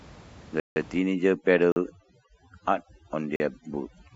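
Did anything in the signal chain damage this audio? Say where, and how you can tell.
Yes. Three blocks of digital silence point to the driver or buffer stage: the signal drops to silence at 0.60 s for 160 ms, then at 1.72 s and 3.36 s for 40 ms each, cutting out and back with no fade. A network dropout would more likely be masked or filled. Silent gaps with clean edges suggest the output buffer wasn't filled in time, so those samples went out empty.

From 0.99 s to the end, overdone noise removal in the processing stage strips the room noise, which sat about 22 dB below the speech, down to near silence with twinkling specks. The quieter parts of the speech are cut away along with it. This differs from the silent blocks: the dropouts are sudden holes, while the over-suppression is continuous and changes its tone band by band as the tool gates whatever it judges to be noise.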